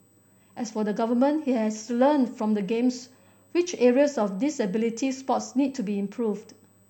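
A thin, fixed-pitch whine sits under the speech for the whole clip, at 8 kHz with its strongest part at 16 kHz, roughly 40 dB below the speech. This is USB whine: current drawn in 125-microsecond bus microframes leaking in through power or ground.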